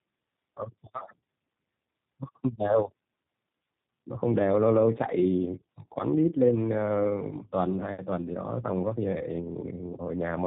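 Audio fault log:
Throughout: tandem speech coding. The speech passes through two low-rate speech coders in a row, and the sound fits iLBC at 13.33 kbit/s handing over through a G.711 A-law link to G.729A at 8 kbit/s. The second coder models a signal the first has already degraded, so the errors compound. The result is rougher, muffled and warbly, with nothing above 3.8 kHz.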